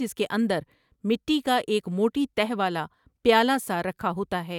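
No technical faults can be heard anywhere in the recording, which holds steady throughout.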